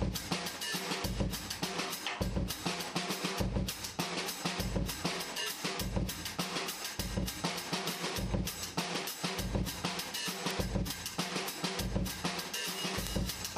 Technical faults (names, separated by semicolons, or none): word clock ticks